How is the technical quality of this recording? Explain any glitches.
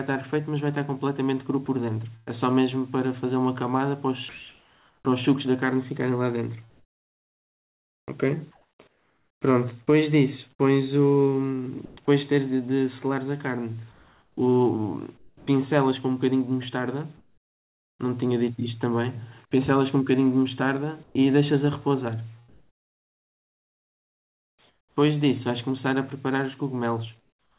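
The recording has two recurring glitches, both from a call link that stops sending audio during pauses. The band ends at 4 kHz, which points to a narrowband telephone codec such as G.711 at 64 kbps.

Sound chopped by the voice detector, from 1.66 to 9.41 s and from 11.85 to 17.99 s: the sender's voice detector likely kept toggling transmission off, so about 3.1 s and then 1.7 s of quiet syllable edges and gaps were swapped for synthetic fill. It sounds choppy, with holes where the fill takes over. On a spectrogram, patches of detailed background alternate with flat, uniform noise blocks. The waveform shows abrupt edges where the fill begins and ends.

Comfort noise in place of the background, from 21.03 to 25.00 s (about 2.6 s replaced) and from 27.19 to 27.58 s (0.39 s): with no speech detected, transmission paused and the receiver likely generated smooth noise roughly matching the background. 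In the final stretch the background sits about 39 dB below the loud parts and drops a further 12 dB or so when the fill takes over. It sounds like a hush of featureless hiss. A spectrogram shows a smooth, textureless band below 4 kHz, and in the final stretch the waveform shows a sudden step down in level.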